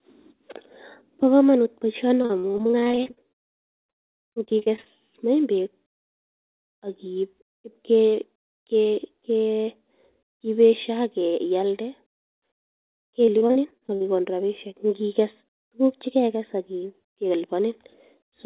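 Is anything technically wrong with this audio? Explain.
Yes. This speech has two stretches of repeated packet loss with the robotic sound that goes with it, from 2.22 to 4.87 s and again from 13.25 to 14.04 s. Dozens of brief holes, none longer than about 54 ms, arrive in quick succession, and each is papered over by stretching the sound that came just before. Roughly a third of each stretch is this patched-in material, so the speech turns choppy, with pieces missing. Unlike a single dropout, the damage recurs steadily throughout each stretch. Unlike distortion or clipping, it leaves gaps and smeared repeats rather than harshness on loud peaks. All of this sits on a narrowband call sound with nothing above 4 kHz, which fits a G.711 mu-law path.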